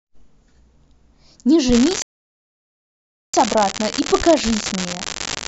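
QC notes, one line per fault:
1.72 s to the end at 5.48 s, unreliable data bit: from here a steady crackle sits under the speech, and it keeps fizzing right through the gaps. That's one marginal data line flipping its bit in a random share of samples, so every error lands as a spike of the same size.
2.02 to 3.34 s, rebuffering stall: the speech drops to dead silence for about 1.31 s, then picks up exactly where it left off. The player ran dry of downloaded audio and waited for more, so nothing's missing, just extra time added.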